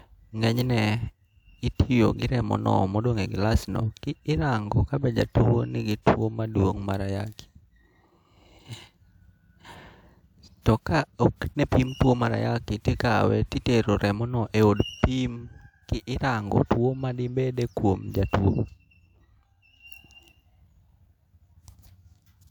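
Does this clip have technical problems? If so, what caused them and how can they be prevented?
No, nothing here points to a technical problem, so there's no cause to track down and nothing in particular to guard against.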